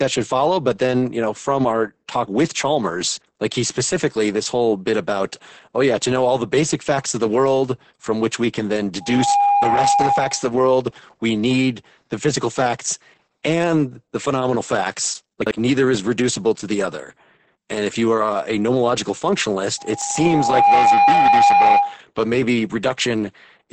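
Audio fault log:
throughout: Opus voice compression. Heavy SILK-style coding, consistent with roughly 10 kbps wideband, leaves the speech muffled, hoarse and faintly robotic. On a spectrogram, energy stops sharply at about 8.6 kHz, and the harmonics look smeared and blocky in 20 ms steps.
9.01–10.57 s and 19.78–21.99 s: loudspeaker feedback squeal. The first comes after "which we can then" and the second ends before "but maybe". An 811 Hz tone swells as the mic-speaker loop exceeds unity gain. It builds in about 0.3 s the first time and about a second the second time, and sits about 5 dB over the speech. It shows as a bright horizontal line at 811 Hz.
15.42–15.51 s and 20.02–20.16 s: chunks out of order. At 15.42 s, between "and the phenomenal facts" and "neither is reducible to", a 46.44 ms chunk plays one chunk late. At 20.02 s, inside the second squeal, one plays two chunks late. Each swap leaves three hard joins, heard as a jumbled moment. 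These appear as waveform steps and thin vertical spectrogram lines.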